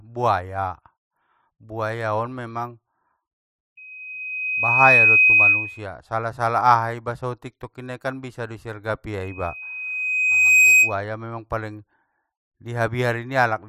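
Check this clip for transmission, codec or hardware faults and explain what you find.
The speech carries a hardware fault: loudspeaker feedback squeal at 3.77–5.85 s and 9.22–10.99 s. A mic-to-speaker loop exceeds unity gain at 2.5 kHz, swelling over roughly 1 to 1.5 seconds into a tone around 10 dB above the speech. On a spectrogram it shows as a bright horizontal line.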